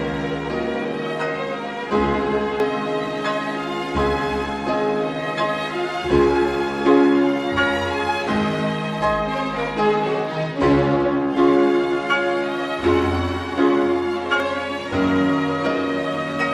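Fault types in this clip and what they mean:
Dropped buffer (overrun): twice the sound jumps ahead, losing up to about a tenth of a second, likely unread samples overwritten, with no silent gap, unlike a dropout.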